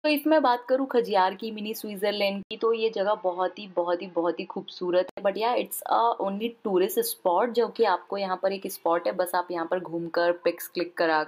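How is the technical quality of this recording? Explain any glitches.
One glitch stands out. Input switched to a poorer device, likely, from 2.43 to 5.17 s: after an 80 ms gap the band narrows, with nothing above 6.4 kHz, so the sound turns dull. A faint new noise floor appears, roughly 45 dB down, the level barely shifts, and then it clears again.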